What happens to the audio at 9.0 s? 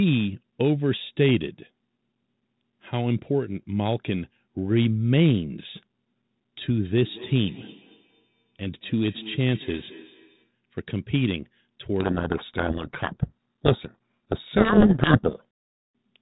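At 9.0 s the speech is inside a stretch of feedback echo between two devices, running from 6.84 to 10.54 s. A second device on the same call replays the sound into a microphone, whose echo canceller only removes its own playback, so the sound returns as a quieter copy, about 21 dB below the speech, roughly a fifth of a second behind. Unlike room reverberation, which smears into a smooth tail, these are distinct, thin, ringing repeats.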